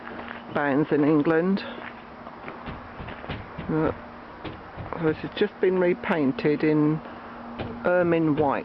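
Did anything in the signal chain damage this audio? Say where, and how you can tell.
No, nothing in the signal chain stood out as damaging this audio when I listened to it.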